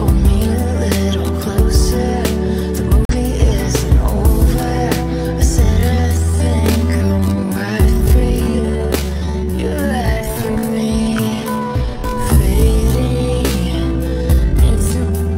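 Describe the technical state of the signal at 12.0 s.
At 12.0 s the audio sits inside a time-stretched section running from 5.62 s to the end, slowed to about 0.59 times its pace. It drags, the likely result of software repeating short pieces to lengthen it. Unlike slowed playback, the pitch doesn't drop.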